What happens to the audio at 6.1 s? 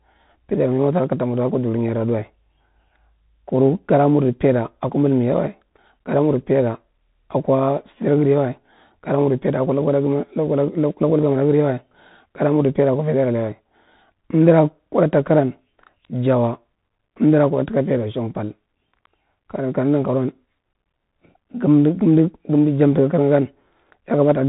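At 6.1 s the speech carries the Bluetooth CVSD headset codec damage that runs through the whole clip. CVSD codes the waveform one bit at a time, each bit only stepping up or down, with a step size that adapts. The character fits a 64 kbit/s stream. Nothing above about 3.8 kHz survives, loud high-frequency energy outruns the step and distorts, s sounds turn scratchy, and a granular hiss sits underneath.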